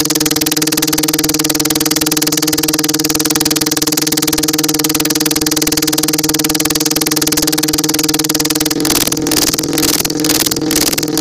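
Integer overflow runs throughout: the level is driven about 24 dB too hot, and a small fraction of peaks wrap to the opposite sign instead of limiting, giving harsh cracks sharper than clipping.

At 7.99 s a brief skip of a few milliseconds joins both sides with no gap, likely audio missing between chunks at a 4 s chunk boundary.

From 8.73 s to the end, buffer tearing adds a 21.5 Hz rattle, which fits a 2048-sample buffer. Somewhat under half of each period repeats audio from roughly 150 ms earlier, with hard joins on both sides.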